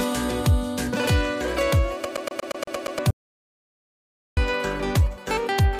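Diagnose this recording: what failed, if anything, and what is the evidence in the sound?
A rapid, even stutter from 2.05 to 2.99 s repeats the same 117 ms slice eight times: a CD stuck on one turn, the playback laser jumping back at a scratch.

From 3.11 to 4.37 s the audio drops to dead digital silence for about 1.26 s, with no room tone: an audio dropout, likely a lost input connection upstream of the recorder.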